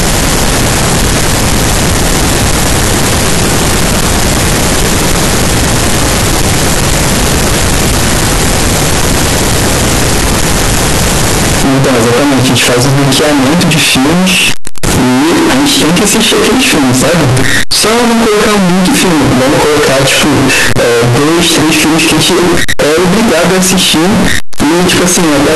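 From start to finish the speech is slammed into a harsh, near-square buzz at an almost fixed, high level, with background noise as loud as the talker. That's likely float read as integer: 32-bit float samples interpreted as 32-bit integers.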